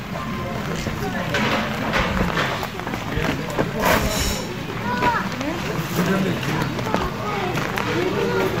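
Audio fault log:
4.92 s and 6.60 s: lost LE Audio frames. Brief noisy smears, each fitting a single 7.5 ms LC3 frame concealed by repeating the previous spectrum with randomised signs.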